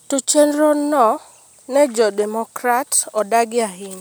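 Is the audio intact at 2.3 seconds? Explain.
Yes, the speech is intact at 2.3 s, with no dropout, click, distortion or other technical fault at that moment.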